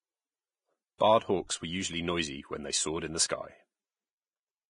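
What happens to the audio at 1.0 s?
At 0.98 s a short burst of pre-echo runs until about 1.00 s, smearing roughly 25 ms of hiss ahead of a sharp onset in the speech. The transform codec spreads its quantisation noise evenly across each block. Because this attack lands near the end of a block, noise scaled for the loud part also fills the quiet stretch before it. The result is a short hiss that anticipates the onset and leaves the attack soft and blurred.

Around that moment, as across the whole recording, the speech carries heavy damage that is likely from Vorbis compression. Nothing survives above 10.6 kHz. The upper band is grainy and hissy because the fine treble detail has been quantised so coarsely that it turns into noise of similar energy. Tones sound roughened and transients lose definition. That degree of damage fits a low bitrate, on the order of 25 kbps.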